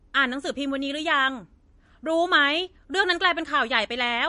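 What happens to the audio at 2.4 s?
MP3 compression is plainly audible at 2.4 s, as across the whole clip: nothing above 10.6 kHz and a watery, swirling texture, likely from an encoder starved of bits (which fits roughly 40 kbps) cutting the treble and dropping weak frequency lines frame to frame.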